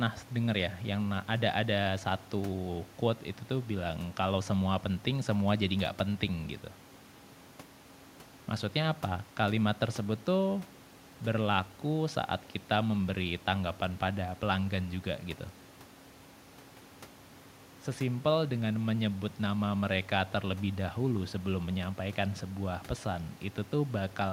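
Listening to the speech in this recording, nothing stood out as a technical problem.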